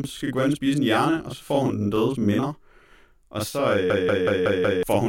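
Right from the start, the speech has a channel delay doubling. One channel runs about 40 ms behind the other, and when the two are folded to mono you hear both copies at the same level. At 40 ms they don't quite fuse, so every syllable gets a short slap or double-tracked edge. It isn't a room echo; it's a plain timing offset between channels that sits there the whole way through.

Then from 3.90 to 4.83 s there's a system hang loop. The machine or driver froze while the audio hardware kept cycling through its ring buffer, so one chunk of about 186 ms plays over and over, five times, at roughly 5.4 Hz. That fits an 8192-sample buffer. It comes across as a choppy machine-gun stutter rather than a buzz, and about a second of the real speech is gone by the time it lets go.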